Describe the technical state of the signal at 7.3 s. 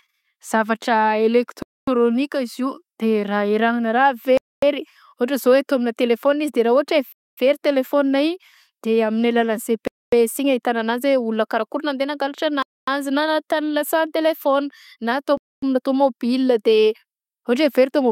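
At 7.3 s the speech falls into a gap between chunks, a 250 ms silence from 7.12 to 7.37 s at a 2.5 s chunk boundary, showing as a flat waveform and blank spectrogram column with hard edges.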